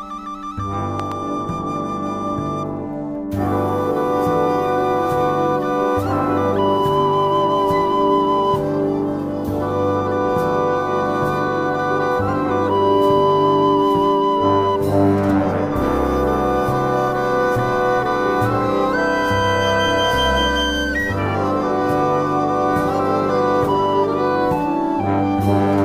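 A loud pop arrives between 1.00 and 1.14 s as two sharp hits in quick succession, standing roughly 10 dB above the surrounding sound, which carries on beneath them undisturbed. The likely cause is a sudden voltage step or pulse entering the signal path, from a plug being seated, a switch, a static discharge or a driver glitch, with the following circuitry shaping that jolt into a brief thump-like burst before it settles.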